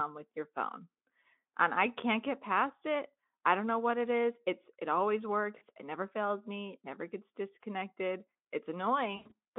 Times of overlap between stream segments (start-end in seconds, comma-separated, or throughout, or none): none